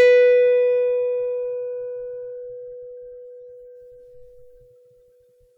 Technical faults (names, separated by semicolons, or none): none